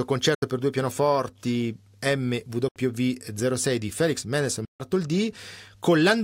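Speech with three silent gaps, at 0.35 to 0.42 s, 2.68 to 2.76 s (each about 73 ms), and 4.65 to 4.80 s (about 145 ms). The speech resumes as though it kept playing underneath, pointing to a likely Bluetooth dropout, with packets arriving too late and being discarded.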